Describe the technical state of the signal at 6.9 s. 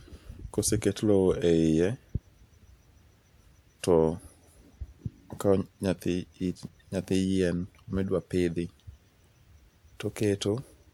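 At 6.9 s the speech signal is intact, with no audible technical fault at that point.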